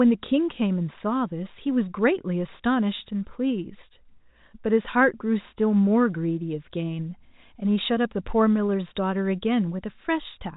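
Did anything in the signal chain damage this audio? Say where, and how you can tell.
No, nothing in this speech stood out on listening as damage from any stage of the signal chain.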